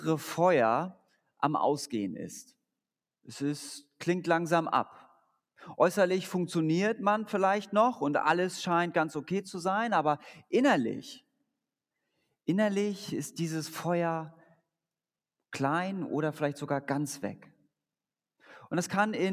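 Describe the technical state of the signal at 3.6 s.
At 3.6 s the signal is intact, with no audible technical fault at that moment.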